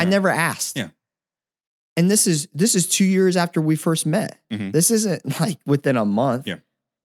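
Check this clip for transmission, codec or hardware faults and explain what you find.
No transmission, codec or hardware faults are audible anywhere in this speech recording.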